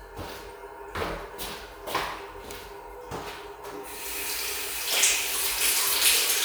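Nothing here stands out as a technical fault; the audio just runs along without any glitches worth pointing to.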